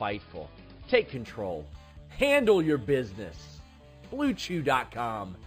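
From 1.15 s to the end, imaging from linear upsampling is audible. The audio was raised from 11 kHz to 44.1 kHz by straight-line interpolation, which filters poorly: the top of the original band is dulled, and a mirrored copy around 25 dB down fills 5.5 to 11 kHz, adding a faint metallic shimmer.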